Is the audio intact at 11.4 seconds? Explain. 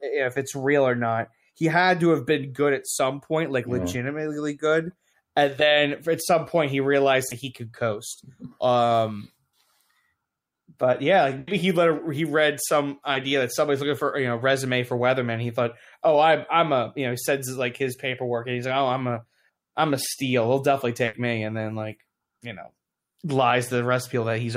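No. A burst of packet loss spans 11.39 to 11.49 s, after "but yeah like". The receiver holds and fades the last sound for 80 ms, then resumes at "he let he read" with 80 ms missing.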